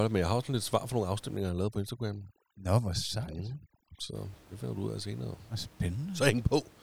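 A speech clip with overdone noise removal from 1.37 to 4.15 s, between "lidt svar for nogle" and "det finder du ud". The reducer cuts whole frequency bands it mistakes for noise. The background drops and breaks up into twinkling specks. Quiet voice detail goes too. Room noise sits about 26 dB below the speech.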